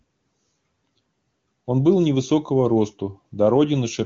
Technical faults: none

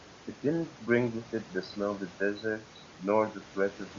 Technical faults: none

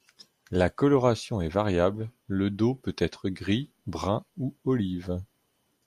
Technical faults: none

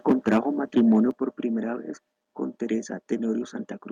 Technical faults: microphone overload; microphone volume stepped down

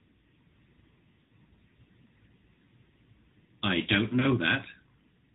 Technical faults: AMR narrowband mobile codec; lost AMR speech frames

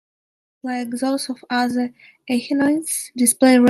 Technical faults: automatic gain rising

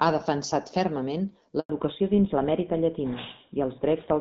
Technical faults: handover gap; fallback to narrowband

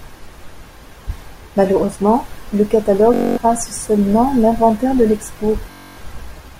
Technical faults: Bluetooth stutter

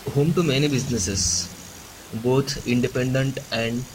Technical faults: none

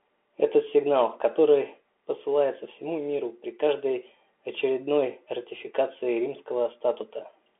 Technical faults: Bluetooth CVSD headset codec

